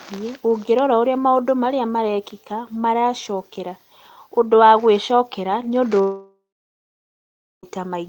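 At 6.01 s, just after "wa gwĩcokera nĩ ũndũ", the speech turns into a fading buzz, then falls silent for about 1.2 s until 7.66 s. This likely long network dropout lost about 1.6 s. Unlike a brief packet loss, the concealment gives up entirely, and speech resumes with that stretch missing.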